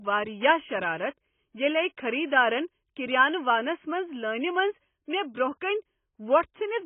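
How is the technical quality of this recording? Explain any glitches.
The technical quality is poor. The whole recording carries heavy AAC compression damage. Nothing is heard above about 3.4 kHz, so the speech sounds dull and boxed in. Sibilants turn fizzy, and sustained vowels warble and smear. The likely cause is AAC-LC encoding at a very low bitrate, around 16 kbps. With so few bits, the encoder drops the high band entirely. It also starves the remaining frequencies, leaving gaps and rough texture throughout.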